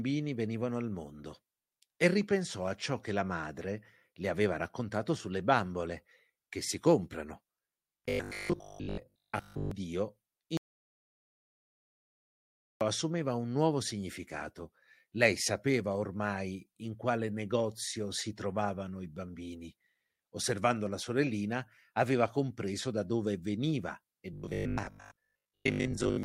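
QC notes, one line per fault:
7.97–9.71 s and 24.33–26.23 s: robotic sound from repeated short buffers. The speech turns into a rigid, metallic buzz at 50 Hz. That pitch matches a 20 ms chunk replayed over and over, likely because new audio arrived too seldom. Most of the real speech in these spans is skipped.
10.57–12.81 s: audio dropout to silence. The speech cuts out abruptly and returns about 2.24 s later. The gap is silent with no room tone. The input was likely lost while silence kept being written. Whatever was said then is gone.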